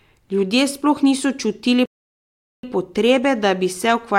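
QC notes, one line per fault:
1.86–2.63 s playback stall: speech cuts off mid-flow for 0.78 s, likely because the player ran short of data. It shows as a flat waveform and blank spectrogram band before resuming.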